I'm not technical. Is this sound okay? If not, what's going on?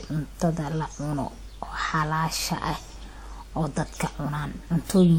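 No. The speech carries compression damage from start to finish, likely low-bitrate audio saved at a high bitrate. Unlike ordinary low-quality files, the sound isn't dull or cut off at the top.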